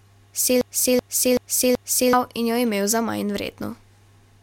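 A broken-record loop runs from 0.61 to 2.13 s in this speech clip: a single 0.38 s fragment plays four times back to back before the audio resumes at "in jo imel za". The repeats are identical, with no fresh material between them, so whatever should have been heard during that stretch is missing. This likely comes from a stalled player, encoder or stream that kept resending the last fragment in its buffer until data flowed again.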